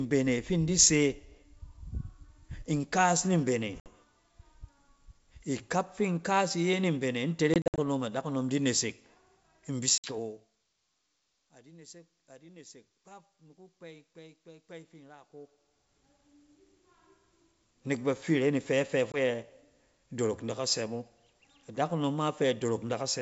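Packet loss on an ADPCM call cuts hard silent gaps at 3.80, 7.54 to 7.79, 9.98 and 19.12 s. Each time, the decoder's predictor loses step, so the speech returns with brief distortion.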